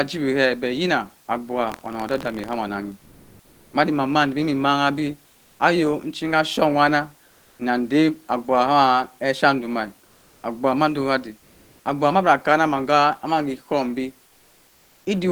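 From 1.67 to 2.55 s there's buffer tearing: a steady robotic buzz at 43.1 Hz riding on the speech, which fits a 1024-sample buffer. The writer and reader have slipped, so a small sliver of each buffer replays audio from roughly a tenth of a second earlier, with hard joins.

Then comes comfort noise in place of the background in five pauses: 2.99 to 3.73 s, 5.31 to 5.59 s, 7.25 to 7.59 s, 10.05 to 10.43 s (just before "abgubhu mando"), and 11.39 to 11.85 s. The real room noise, sitting about 40 dB under the speech, gets swapped for flat, featureless hiss, likely from Opus DTX. Its level shifts by about +5, -2, -1, +2 and +3 dB respectively.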